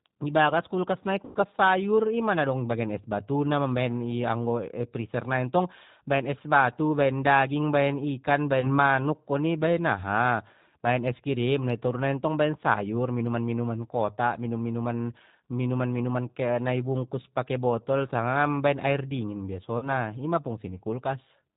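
Right from the start the whole thing has that G.729 codec sound, here the G.729A flavour at 8 kbit/s, and the damage is easy to hear. Everything above 4 kHz is simply gone, so the speech comes across thin and muffled. It stays intelligible, but there's a rough, slightly synthetic edge to it, because the decoder is rebuilding the voice from a vocal tract filter, a pitch predictor and a handful of pulses per frame rather than carrying the actual waveform.

On top of that there are three spots of VoIP packet loss concealed by the speech codec. The first, from 1.25 to 1.37 s, covers about 100 ms of missing audio, which fits roughly five 20 ms packets. The decoder just keeps repeating its last pitch and filter while turning the gain down, so the sound gets stretched out and fades away. Since each frame is built on the one before, the voice stays a bit weak and off for a moment after real audio comes back. 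A single dropout of about 20 ms follows at 8.61 to 8.79 s, and then about 40 ms at 19.78 to 19.88 s. Both are concealed the same way and show the same slow recovery.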